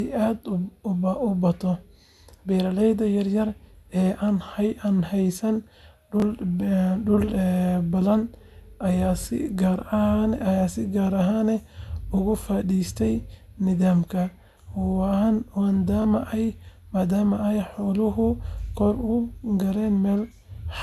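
At 6.20, 9.22 and 16.02 s, new audio failed to reach the playback device in time, so it played its last buffer again: a repeated buffer. Each time a block of about 23 ms, which fits a 1024-sample buffer, sounds twice in a row, with a hard join where the repeat starts, and roughly 20 ms of the speech is lost. Each event comes across as a very brief stutter or buzzy click in the speech.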